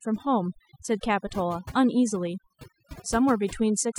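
A short speech recording with overdone noise removal running through its whole length: the background drops and breaks up into twinkling specks. An overly aggressive noise reducer is cutting individual frequency bands near its noise estimate, taking quiet voice detail with them.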